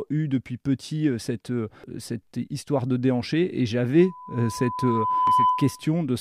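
Speech recorded through a compressed stream carries two kinds of fault. Damaged data in the compressed stream shows up as brief glitches at 1.84 s and 5.27 s. At each point the decoder hits corrupted bytes, misreads or discards the affected frames, and loses sync until it finds the next valid frame header. From 4.00 s to 5.89 s a loudspeaker feedback squeal appears: a single 1 kHz tone swells over roughly one and a half seconds to about 5 dB above the speech. This is the signature of a microphone picking up its own loudspeaker, where the loop gain at 1 kHz exceeds unity and that frequency keeps reinforcing itself until the loop is broken. The second data glitch at 5.27 s falls inside the squeal.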